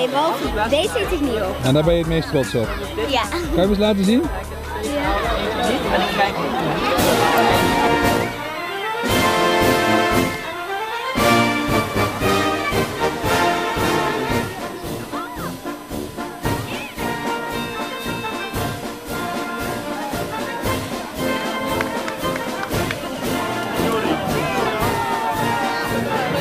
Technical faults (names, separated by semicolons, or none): USB whine